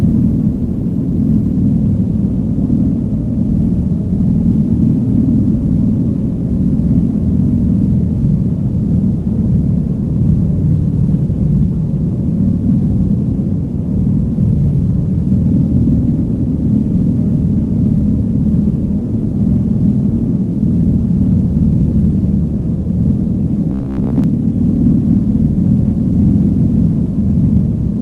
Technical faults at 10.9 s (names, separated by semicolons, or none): none